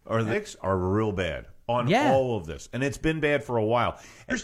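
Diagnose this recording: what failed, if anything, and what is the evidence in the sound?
The fault lies at the codec stage: damaged data in a compressed stream. Two short glitches cut into the speech, from 0.28 to 0.34 s and from 4.28 to 4.34 s, each lasting about 50 to 60 ms. Corrupted bytes made the decoder misread those frames and lose sync until it found a valid frame header. Unlike a network dropout, which leaves a gap or a smooth concealment fill, this produces abrupt glitches such as chirps, squawks, clicks or short holes, usually with a jump ahead in the audio.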